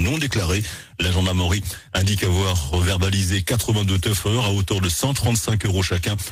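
Nothing stood out as a technical problem on listening to this audio.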